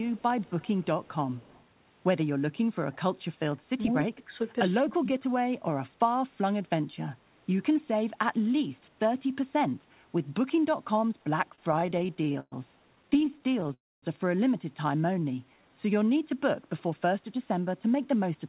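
Right at the start, from 0.05 to 0.22 s, there's an echo leak: a delayed copy of the speech comes back about 132 ms behind the original, at about 15 dB below it. It returns at 0.43 to 0.85 s, 1.05 to 1.13 s and 1.31 to 1.65 s, lower than the first at about 30, 35 and 30 dB down, always with that same 132 ms lag. The likely cause is a speakerphone on one end whose echo canceller didn't scrub out everything its mic picked up from the loudspeaker, so the leftovers got sent back.

Next comes speech suppressed in double talk, at 3.14 to 3.20 s, 4.04 to 4.33 s and 4.82 to 5.36 s. In each spot the speech level drops, by about 15 dB in the first, about 25 dB in the second and about 30 dB in the third. What's probably happening is that the far end was playing on the loudspeaker while this side talked, and the echo canceller couldn't tell the talker from the echo, so it pulled both down together.

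From 11.50 to 12.54 s you get repeated stalls, a stutter. The audio hangs 17 times and the receiver fills about 297 ms by stretching out the last bit of sound. The longest hang is 118 ms. A second run from 12.96 to 13.72 s has 16 shorter hangs, none longer than 14 ms, totalling 161 ms. Packets kept turning up late, so the jitter buffer kept running dry. Nothing is actually lost, but the speech drags and judders.

Right after that, at 13.74 to 14.04 s, there's a call audio freeze. The last sound is carried on briefly and then fades, with about 240 ms of it silent, 289 ms filled in total. Packets were held up somewhere along the way, most likely. When they arrive the speech picks up exactly where it stopped, so nothing is missing, but everything after it now sits 289 ms later.

From 14.87 to 15.95 s there's a jitter buffer slow-down. Playback runs at about 86% speed at the same pitch, with 156 ms added. 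The receiver is topping up a low buffer by repeating single pitch periods or bits of pause over and over, which draws the sounds out.

The last one, from 17.61 to 18.44 s, is a jitter buffer speed-up. Things run at about 110% speed with the pitch unchanged, and around a tenth of a second is cut out. The buffer was holding more than it wanted, so it trimmed short pitch-period chunks to bring the delay back down, which makes the speech sound hurried.

Throughout, the call path itself comes across as a narrowband telephone line with nothing above 4 kHz, which fits G.711 A-law.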